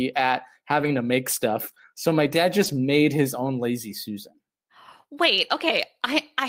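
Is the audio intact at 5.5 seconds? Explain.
Yes, the audio is intact at 5.5 seconds, with no dropout, glitch or other fault at that moment.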